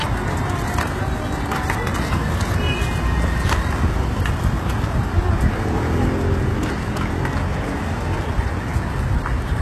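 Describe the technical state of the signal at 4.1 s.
Likely HE-AAC compression at 4.1 s, present throughout. Treble is rebuilt from copied lower bands, sounding gritty and metallic, with nothing above 12.3 kHz.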